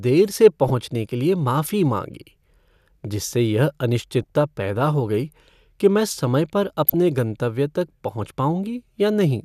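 Corrupt frame decoded at 0.68–0.70 s, 4.22–4.30 s and 6.87–6.94 s in speech: damaged compressed frames were still played, throwing misplaced energy into brief bursts, faint at 4.2 s and strongest at 6.9 s.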